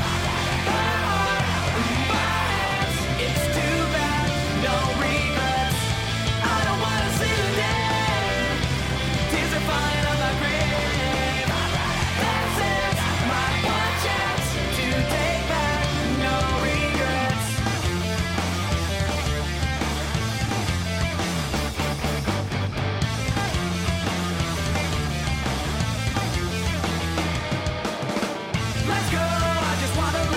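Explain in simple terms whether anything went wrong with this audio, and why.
Two sharp clicks stand out, one at 5.00 s and one at 10.75 s. Each is a single sharp click. The likely cause is dropped samples: a sliver of audio, well under a millisecond, went missing. The sound jumps ahead abruptly, and that jump clicks.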